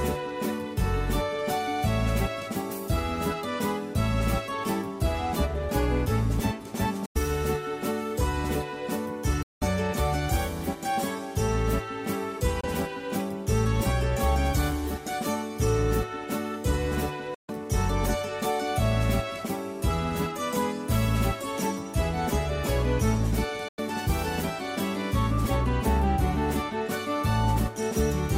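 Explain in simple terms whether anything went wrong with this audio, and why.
Bluetooth dropouts, likely from sound packets reaching the headphones too late to play, cut the audio to sudden silence at 7.06, 9.42, 12.61, 17.34 and 23.68 seconds.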